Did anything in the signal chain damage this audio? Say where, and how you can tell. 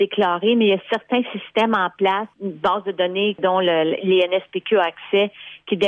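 No, nothing stood out on listening that would point to damage at any stage of the chain.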